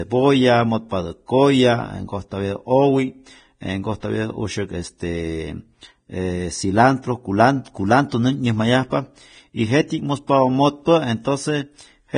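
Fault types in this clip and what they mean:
Vorbis compression: Throughout, the speech carries heavy codec damage, likely from Vorbis at a rate that fits about 23 kbps. Nothing survives above 9.7 kHz, and the remaining treble is quantised so coarsely that fine detail turns into grainy hiss, roughening tones and blurring onsets.
Pre-echo: From 10.27 to 10.29 s, a short hiss about 20 ms long runs just ahead of a sharp attack. The codec spread quantisation noise sized for the loud onset across its whole block, filling the quiet moment before it and smearing the attack.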